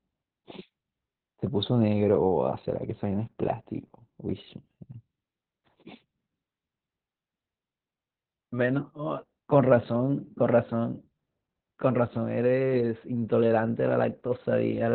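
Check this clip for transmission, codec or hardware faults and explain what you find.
There's one fault, and it runs the whole way through: Opus voice compression, heavily damaged. Nothing reaches above about 4.4 kHz, so the speech sounds muffled, hoarse and a bit robotic. That's the narrowband SILK mode squeezing the excitation coarsely, which fits a bitrate around 8 kbps.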